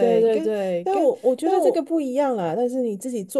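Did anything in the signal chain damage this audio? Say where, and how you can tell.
Yes. Until 1.76 s there is a doubled audio track. An equally loud, dry copy of the speech trails about 0.7 s behind, likely from a second capture path.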